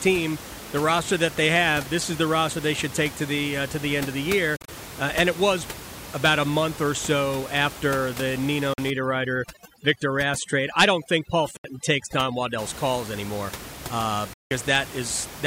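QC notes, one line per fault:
4.56–4.68 s, 8.74–8.78 s, 11.57–11.64 s, 14.33–14.51 s, Bluetooth dropout: audio packets likely arrived too late at the headphones and were discarded. The output cuts to silence: 87 ms lost in gaps scattered over 116 ms (longest 44 ms), then 44 ms, 73 ms and 174 ms. Each time the speech resumes further along, as though it had kept playing.
8.90–12.59 s, overdone noise removal: noise reduction is set too aggressively, switching off frequency bands near its noise estimate. The room noise, about 14 dB below the speech, drops and breaks up into twinkling specks, and the quieter parts of the speech are stripped with it.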